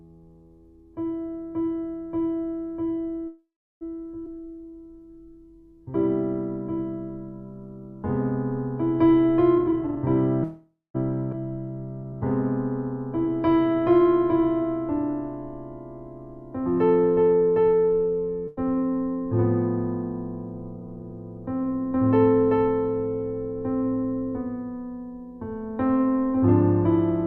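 The audio has two gaps, two abrupt jumps, changes of pace in both directions and one burst of loss. At 3.27–3.83 s and again at 10.44–10.96 s there is a call audio freeze. The last sound is stretched into a fading fill lasting about 0.54 s and 0.51 s, which falls to silence for about 340 ms and 170 ms. The audio then picks up exactly where it stopped, with nothing missing. That is what separates it from packet loss, and the likely cause is held-up packets emptying the jitter buffer. Skip ahead occurs at 4.25–4.28 s and 11.32–11.35 s. Playback leaps forward with almost no fill, only a few milliseconds, dropping roughly a tenth and a third of a second respectively. This happens because audio was discarded while later audio was already queued. A jitter buffer slow-down runs from 4.34 to 5.93 s at 92% speed, adding 123 ms, and from 12.03 to 14.64 s at 93%, adding 188 ms. Pitch periods were repeated to rebuild the reserve, so the pace drags while the pitch stays unchanged. 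The opposite happens in a jitter buffer speed-up at 9.55–9.97 s, which plays at 201% speed with roughly 0.4 s cut out. The result is a rushed stretch at normal pitch, made as the receiver trimmed an overfull buffer. At 18.48–18.59 s a burst of packet loss fills 93 ms with a fading continuation of the last sound, but 140 ms of audio is gone. Unlike the freezes, this gap resumes further on rather than where it stopped.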